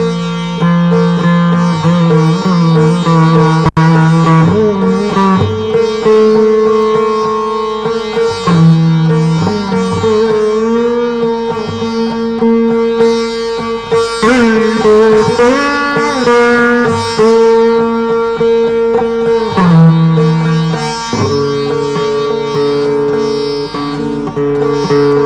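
A block size mismatch (truncated) runs through the whole clip. The tail of each block is discarded at a boundary, which causes a steady 43.1 Hz buzz consistent with 1024-sample blocks, while the sound keeps its normal speed. A spectrogram shows evenly spaced vertical clicks, and the waveform shows regular jumps.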